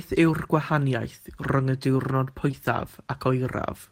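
At 2.51 to 2.55 s there is a short concealed packet loss. About 20 ms of audio failed to reach the decoder in time, and the receiver synthesised roughly 14 ms of substitute signal from the preceding sound before crossfading back, heard as a brief smear in the speech.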